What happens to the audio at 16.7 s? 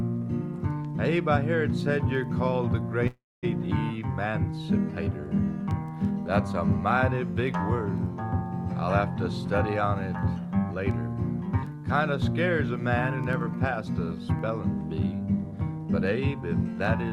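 Jitter buffer speed-up runs from 15.03 to 16.75 s: the receiver trims short pitch-period slices, about 150 ms in all, so the sound hurries along at 108% speed without changing pitch.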